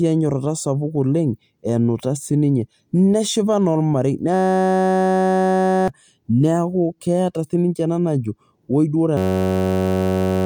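A system hang loop twice froze the driver while the hardware kept replaying one 10.67 ms slice of this speech, which fits a 512-sample buffer. From 4.34 to 5.88 s and from 9.17 s to the end, it becomes a steady 93.8 Hz buzz, each time losing about one and a half seconds of audio.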